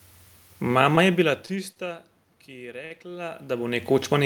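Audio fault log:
0.95–1.79 s, repeated stalls (stutter): four short jitter-buffer underruns, longest 33 ms, about 83 ms filled in total; the sound drags and stutters without losing anything.
2.85–2.93 s, short stall from a late packet: a 50 ms jump in packet delay emptied the buffer, so the last sound is held 50 ms, then resumes intact.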